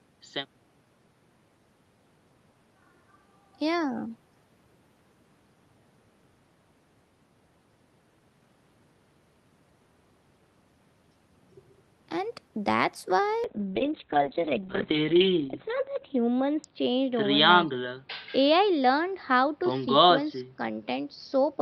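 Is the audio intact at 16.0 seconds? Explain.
No, the speech sounds muffled and rough from 13.46 s to the end: a call bitrate drop from 32 to 6 kbps made Opus code coarsely and cut the bandwidth to 4 kHz.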